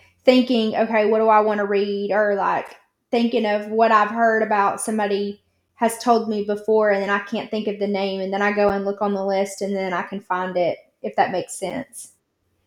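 At 2.68 s, 5.69 s (between "I've heard about somebody" and "has told me before"), 8.69 s (between "and then I go" and "and look on the") and 11.70 s (just after "it if that makes"), the speech has a gap between chunks: a hole of about 7 ms recurring every 3.0 s. Each sounds like a tiny hole or dip. On a waveform it shows as a flat, hard-edged run of near-silence, and on a spectrogram as a thin vertical blank stripe.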